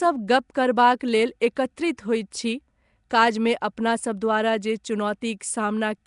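From start to end the speech carries a rough, hissy halo and a smeared, underwater quality, with nothing above 10.6 kHz. The likely cause is Nellymoser compression near 44 kbps, whose fixed bit budget per block leaves weak bands noise-filled.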